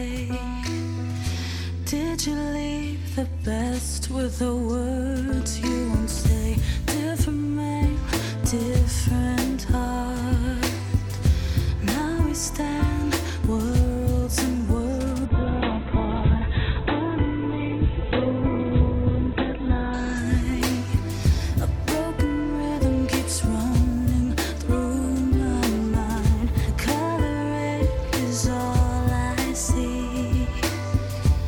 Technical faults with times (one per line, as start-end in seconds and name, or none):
15.29-23.53 call bitrate drop